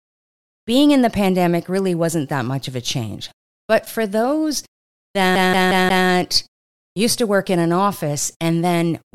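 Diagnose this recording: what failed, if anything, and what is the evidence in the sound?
The playback stage failed: the recording shows a CD stuck on one turn. From 5.35 s to 6.07 s the same 0.18 s slice of speech repeats four times, each pass cut by a brief mute where the laser jumps back to the same damaged track. On a waveform that is four identical blocks with tiny dropouts between them. A spectrogram shows the same pattern stamped out at an even 0.18 s rhythm, the skipping-disc stutter.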